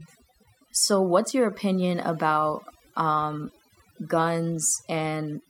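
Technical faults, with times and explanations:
Throughout: overdone noise removal. Bands near the estimated noise floor are pulled almost to nothing, so the background becomes near-silent with twinkling specks, and the quieter parts of the speech vanish with it. Unlike a noise gate, the dropouts happen band by band, not all at once.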